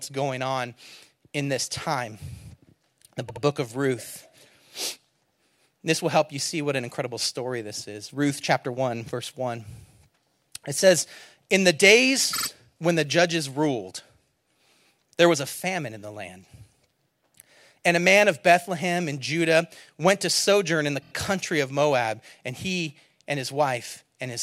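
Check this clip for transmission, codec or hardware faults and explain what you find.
Repeated frames occur three times in the speech. At 3.28 to 3.42 s a 72 ms block plays twice more. At 12.33 to 12.47 s, just before "when the judges ruled", a 48 ms block repeats three extra times. At 21.01 to 21.11 s, between "to sojourn in the" and "country of", a 24 ms block plays four extra times. Each stutter comes from compressed frames being sent or written more than once. Unlike a dropout, no audio goes missing. The same fragment recurs, so the clip grows longer.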